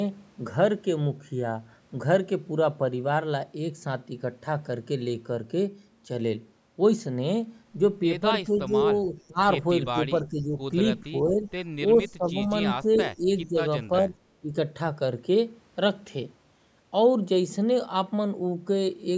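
A speech recording, heard through a call's microphone processing, with content reaching up to 8 kHz. The talker's level repeatedly sags. This happens at 8.46–9.39, 9.93–10.57, 11.03–11.5, 11.97–12.5, 12.83–13.57 and 13.88–14.56 s. Each dip lasts a few hundred milliseconds. The deepest, about 20 dB, comes in the first stretch. The 11.97 s one drops about 15 dB, and the rest about 10 dB. This pattern is likely speech suppressed in double talk. The far side seems to be speaking at the same moments. The echo canceller cannot tell the talker from the returning loudspeaker sound, so it turns everything down. Inside the 12.83 s dip, from 12.94 to 13.01 s, a brief delayed copy of the voice slips through. It lags by 418 ms and sits about 10 dB below the speech. That short scrap is likely an echo leak. The remote echo canceller probably failed to remove all of its microphone's pickup.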